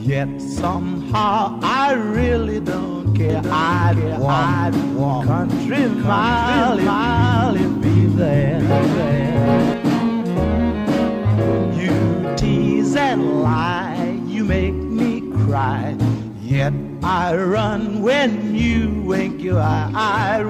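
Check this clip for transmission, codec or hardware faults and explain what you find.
One fault is present. From 3.30 to 9.74 s there is a doubled audio track. A second copy, about as loud, trails roughly 0.7 s behind. It likely comes from a slower capture path, and it starts and stops abruptly.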